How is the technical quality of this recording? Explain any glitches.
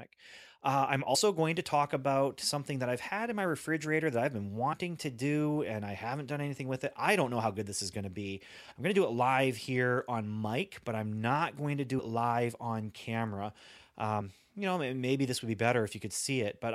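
The speech has three short dropouts from compressed frames skipped. At 1.14 s, just before "going to talk about", roughly 70 ms goes missing. At 4.72 s, between "refrigerator that I've been" and "to do and I", it's about 50 ms. At 11.98 s, between "I'm not going to" and "live on camera", it's around 150 ms. Whole frames, each about 26 ms, never got played, so the sound jumps forward and you hear a quick blip or click at each join.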